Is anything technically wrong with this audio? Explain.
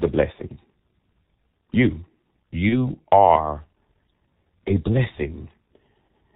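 Yes. Throughout the speech the sound is muffled and hoarse, with nothing heard above about 4 kHz and consonants smeared together. This is the G.723.1 codec working hard. It codes the voice in 30 ms frames and refreshes its model of the vocal tract only slowly, so quick changes are blurred. The heavy, rough quality fits a rate of around 6.3 kbit/s, the higher of this codec's two rates.

From 2.69 s to 2.91 s the speech briefly turns into a stretched, buzzy or noisy sound that fades and then returns weakened and distorted. This is VoIP packet loss concealed by the speech codec. The missing stretch, consistent with one lost 30 ms frame, was filled by repeating the last pitch and filter with falling gain. Because each frame builds on the previous one, the damage lasts about 200 ms, well beyond the gap itself.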